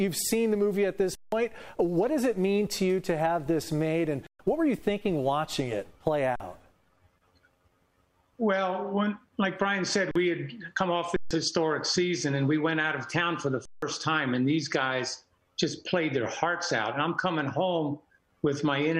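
Six underruns with a held sample, at 1.15, 4.27, 6.36, 10.11, 11.16 and 13.65 s. The output ran dry and the converter froze its last value, so the sound flatlines for 40 to 170 ms, then comes back in with audio missing.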